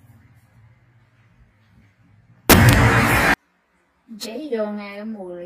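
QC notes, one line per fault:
2.50–3.34 s, samples built from the wrong bytes: for about 0.84 s the reader assembles each sample from misaligned or swapped bytes, so the rapidly fluctuating low-order bits land in the most significant position and the sound is replaced by loud, harsh broadband noise, close to white on loud passages. On the waveform this is a dense block of large, random-looking excursions. The spectrogram shows flat broadband energy covering every frequency, wiping out the normal structure.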